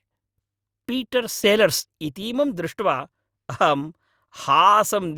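From 1.44 to 1.8 s there is a sudden gain jump, most likely a digital gain change applied from one sample to the next with no ramp. The speech and its background noise leap up together by about 6 dB, then fall back abruptly.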